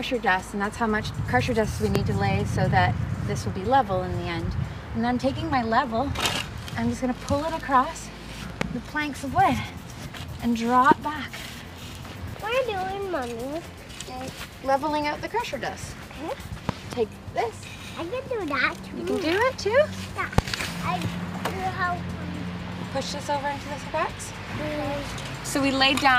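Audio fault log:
1.95–1.98 s, 8.61–8.64 s, 10.91–10.94 s, 16.69–16.95 s, 20.38–20.41 s: loud pop. Each is a sharp, brief pop, and at 16.69–16.95 s there are two in quick succession. They rise roughly 20 to 25 dB above the surrounding sound, which carries on underneath. This likely comes from a sudden voltage step or spike, such as a plug, switch, static discharge or driver glitch, added to the signal and shaped by the following circuitry into a short burst.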